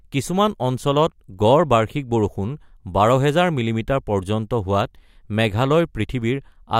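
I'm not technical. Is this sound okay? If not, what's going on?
Yes, it's fine: nothing in this recording jumps out as a glitch or a problem, so there's nothing to worry about here.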